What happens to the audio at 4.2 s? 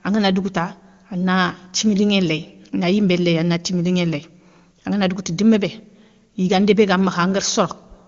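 Nothing goes wrong at 4.2 s: the speech there comes through intact, carried cleanly by the AMR wideband (HD Voice) codec at a high rate with no audible damage.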